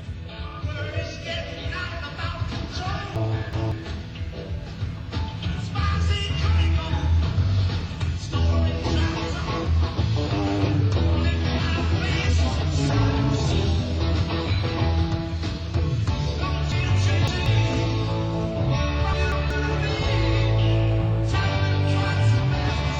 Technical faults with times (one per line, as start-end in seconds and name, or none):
3.16-3.72 chunks out of order
16.72-17.46 chunks out of order
19.13-19.50 chunks out of order